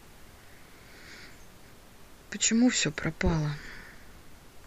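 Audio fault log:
No faults are heard anywhere in this speech clip. Room noise from where the microphone sits stays about 26 dB below the speech and belongs to the recording itself.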